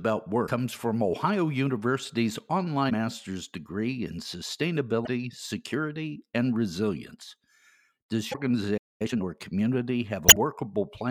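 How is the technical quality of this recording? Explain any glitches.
Not great. The speech has a run of stream glitches, plus one dropout that the player then rushes to recover from.

The main problem is damaged data in a compressed stream, which shows up five times: at 0.43 s, at 2.86 s just before "master's degree in", at 5.03 s just before "security and resilience", at 8.30 s, and at 10.26 s. Each time, some of the coded frames arrived corrupted. The decoder couldn't make sense of them, lost its place, and had to hunt for the next clean frame header. What you hear is a short glitch of about 50 ms, stretching to around 100 ms on the last one.

At 8.77 s there's a playback stall. The audio just cuts out mid-flow for roughly a quarter of a second and then picks up again at 9.02 s. That kind of gap is most likely the player running dry of data, or its thread getting blocked, so there was nothing to send to the output until the buffer refilled.

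Right after that, from 9.02 to 9.24 s, there's time-compressed catch-up. Having fallen behind, the player chops out small slices and cross-fades the joins to burn off the backlog, here at double speed. The pitch stays normal, but that stretch comes across as noticeably hurried.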